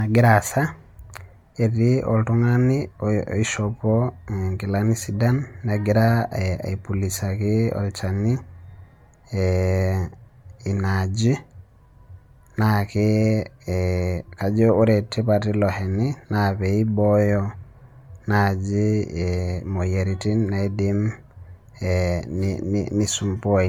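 Throughout the speech, the audio has a swirly, hollow, smeared quality, with blurred consonant attacks and content reaching only to about 19.9 kHz. This is likely generation loss: MP3 encoding repeated around ten times, consistent with 128 kbit/s, each pass stacking fresh quantisation noise and spectral holes.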